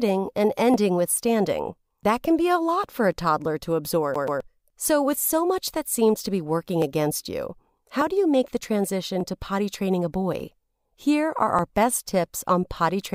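Speech with two distinct faults. From 0.74 to 12.78 s a click recurs every 1.19 s, about ten in all, a steady clock drift buffer slip pattern, likely from two devices whose clocks differ by around 700 ppm, each slip dropping or repeating a few dozen samples. Unlike a skip, nothing audibly repeats. Between 4.14 and 4.40 s the audio stutters like a CD stuck on one turn: a 130 ms fragment repeats twice with a brief mute at each jump, a fast even loop rather than an isolated tick.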